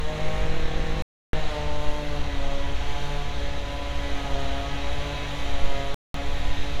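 The sound drops to silence at 1.02 s for about 0.31 s, and again at 5.94 s for about 0.2 s, resuming each time. These are likely Bluetooth stalls, where interference delayed packets and the playback buffer ran dry.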